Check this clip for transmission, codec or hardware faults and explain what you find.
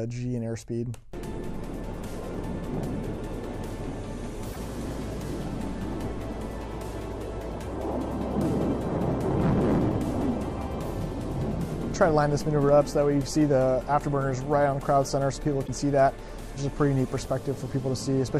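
Damaged data in a compressed stream occurs twice, from 4.51 to 4.56 s and from 15.64 to 15.69 s, each lasting about 56 ms. In both places the encoded bytes are corrupt, so the decoder misreads or rejects those frames, loses sync, and hunts for the next valid frame header before playback recovers. Each event is a brief chirp or blip that cuts across the surrounding sound.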